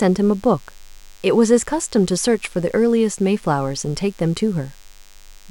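From start to finish the speech sits on a thin, steady buzz: DECT cordless phone buzz. A nearby DECT handset or base station transmits a brief radio burst every 10 ms, and the audio circuitry rectifies it, turning the 100 Hz burst rate into audible sound, here roughly 30 dB below the speech. On a spectrogram it appears as evenly spaced horizontal lines at 100 Hz and its many harmonics, continuing through pauses; the waveform shows small regular spikes every 10 ms.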